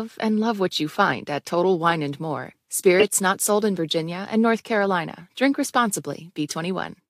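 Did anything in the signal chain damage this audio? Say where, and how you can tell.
Yes, at the codec stage: a corrupt frame decoded from about 2.99 to 3.04 s, just before "not sold in". For roughly 44 ms the speech gives way to a sharp chirpy burst. Damaged bits in a couple of compressed frames were decoded anyway, so misread gains and codes put energy at the wrong frequencies. On a spectrogram it shows as a short vertical block of misplaced energy; the waveform has a sudden high spike.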